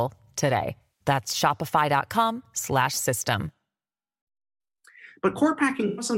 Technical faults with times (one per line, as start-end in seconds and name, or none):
0.82-1.05 AAC frame loss with concealment
5.87-6.06 AAC frame loss with concealment